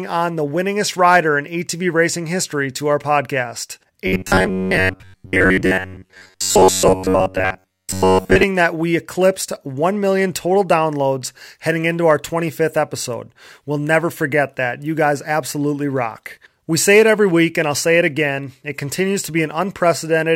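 From 4.07 to 8.43 s, after "history to our podcast", new audio likely arrived too seldom, causing robotic sound from repeated short buffers: a metallic 93.8 Hz buzz until "that we eclipsed".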